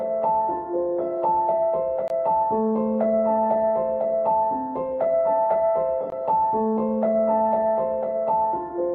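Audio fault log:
2.08–2.10 s and 6.10–6.12 s: gap between chunks. The sound stops dead for about 21 ms at each point, about 4 s apart, because the audio arrives in 4-second chunks and a short stretch of silence is inserted at each join, likely from padding or late starts. Nothing is lost, but the flow breaks. The waveform shows a flat-line notch, and the spectrogram shows a thin, blank vertical stripe across all frequencies.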